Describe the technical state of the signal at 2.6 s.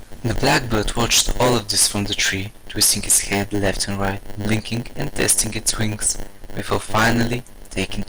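At 2.6 s the speech carries hard clipping, present throughout the clip. The signal is driven about 19 dB past what one stage can pass, so a few percent of samples have their peaks sheared flat. Those flat tops add high harmonics, heard as harsh fuzz on every loud syllable.

Also throughout, including 2.6 s, is a block size mismatch (padded). One stage writes shorter blocks than the next reads, and zeros fill each remainder. The resulting tiny gaps produce a 100 Hz buzz, and the speech runs slow at a 0.919 speed ratio with its timbre intact.

The speech is also dull, with a gurgling, granular grain as upper bands drop in and out and the remaining bands are coarsely quantised. This is likely MP2 compression, and the damage points to a low bitrate around 80 kbps.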